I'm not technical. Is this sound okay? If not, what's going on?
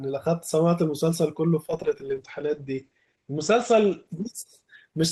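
No. From about 1.7 s to the end, the speech turns rougher and more muffled, losing its crisp top end. This is a call bitrate drop: the connection's capacity fell, so the call squeezed the audio into far less data and stripped the higher sounds.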